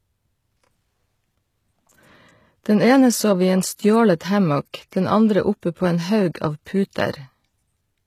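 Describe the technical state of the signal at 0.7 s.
At 0.7 s the speech carries HE-AAC compression artefacts, present for the whole clip rather than at this moment alone. The upper band sounds synthesized: s sounds come out gritty and lisping, with a metallic sheen above the crossover. This is likely spectral band replication, where the encoder keeps only the lower spectrum and fills the treble by copying lower bands upward under a coarse envelope. The plainly audible damage fits a bitrate near 20 kbps.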